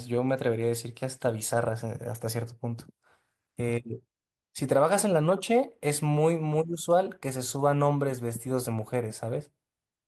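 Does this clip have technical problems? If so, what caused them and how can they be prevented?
Yes. From 1.49 to 1.67 s there is a lost packet rebuilt from error correction. The decoder filled about 100 ms from low-bitrate copies carried in following packets, so there is no gap, but that stretch sounds rougher and noisier, consistent with several separate packets dropping. Reducing network packet loss, or raising the error-correction bitrate, keeps these rebuilt frames cleaner.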